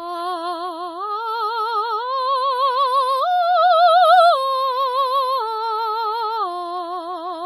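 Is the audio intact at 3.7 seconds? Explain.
No. At 3.7 seconds, as throughout the music, there is a ringing, washy smear with hiss that swells and fades with the signal, likely WMA compression heavy enough to suggest about 24 kbps. Its long transform blocks spread quantisation noise over tens of milliseconds and zero weak lines. Unlike steady background noise, this hiss breathes with the music.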